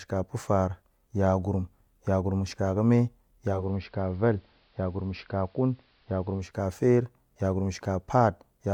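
Speech, with the digital radio blending to analogue from 3.46 to 6.59 s: over a 247 ms cross-fade to AM, faint hiss appears, treble narrows and level drops about 2 dB. The arriving hiss and timed fades distinguish it from a plain filter or codec bandwidth drop.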